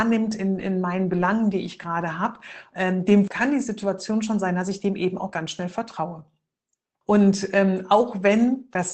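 From 1.09 to 1.23 s, between "in in meinen" and "die ich gerade habe", there is a lost packet rebuilt from error correction. About 80 ms was replayed from the low-bitrate copies carried in the following packets, which fits several separate losses. The sound never drops out, but it turns rougher and noisier. Unlike concealment, it keeps the real content instead of smearing it.

At 5.29 to 5.33 s, right after "ich dem eben auch", comes a short concealed packet loss. About 20 ms never arrived in time, and the decoder bridged it by extending the preceding sound. The result is a brief wobble rather than a rough, noisy stretch. From 5.33 to 5.35 s, just before "schnell vertraue", a further 20 ms is again rebuilt from error correction and has the same coarse texture.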